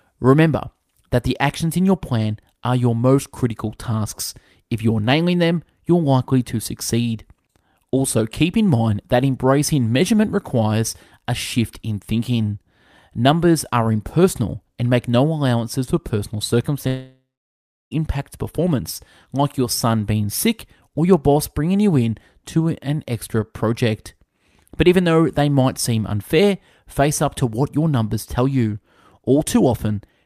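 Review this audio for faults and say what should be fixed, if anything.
A long network dropout occurs at 16.87 s, right after "for personal". The sound turns into a fading buzz, then gives way to about 0.68 s of silence before returning at 17.93 s with "impact performance like your". About 1.04 s of audio never arrives, and the receiver's concealment only smears the last sound briefly, so that content is lost. The likely cause is an interruption in the packet stream long enough to exhaust concealment. To prevent it, use a more reliable network path with forward error correction or retransmission and a jitter buffer sized to ride out short outages.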